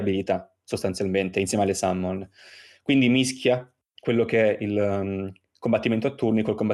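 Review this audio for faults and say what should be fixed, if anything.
No faults found in this speech recording, so nothing needs fixing.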